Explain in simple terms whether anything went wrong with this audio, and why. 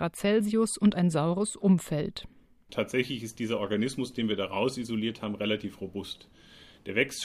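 Nothing went wrong here: the speech comes through steady and intact, with no technical faults anywhere in the recording.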